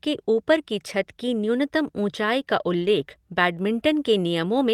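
At 2.81 to 2.87 s, just after "की न्यूनतम ऊँचाई का", a lost packet is rebuilt from error correction. The speech carries on without a gap, but about 40 ms turns rougher and noisier, which fits two 20 ms packets replaced by the low-bitrate copies carried in the packets that followed. Unlike ordinary loss concealment, which smears or repeats the previous sound and fades, this stretch keeps following the real speech, only coarser.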